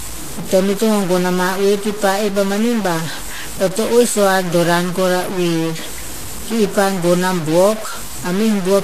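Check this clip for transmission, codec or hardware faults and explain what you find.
Two faults run through the whole speech clip, start to finish: a stuck bit and Vorbis compression damage.

The stuck bit rides on the speech as grainy noise or harsher distortion, depending on which bit is stuck. It's likely one data bit held at a fixed value by a broken line or converter, so roughly half the samples land off by that bit's weight. The pauses don't go quiet either. They fill with a gritty noise floor.

The Vorbis compression is plainly audible: hissy, grainy treble, roughened tones and softened attacks. Nothing gets through above 14.2 kHz. That points to a low-quality Vorbis encode at around 34 kbps, likely quantising the upper spectrum so coarsely that detail turns to noise.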